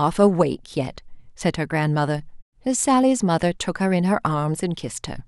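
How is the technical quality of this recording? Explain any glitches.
There is one glitch, a brief spot of DAB burbling at 0.59 s. Weak reception let a small fraction of bit errors, well under one percent, past error correction into the MP2 data, corrupting samples in what sounds like a few frames. Wrong samples in single sub-bands give short blips of noise over the speech.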